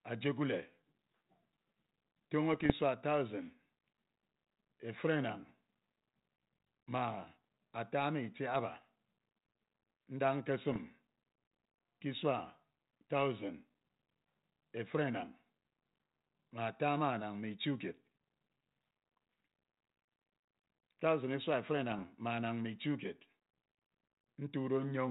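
Bit errors on an ADPCM link hit at 2.53–2.73 s, 10.72–10.78 s and 21.91–22.01 s. Flipped bits upset the decoder's prediction, producing pops and rough bursts that show as spiky waveform jumps and broadband vertical streaks.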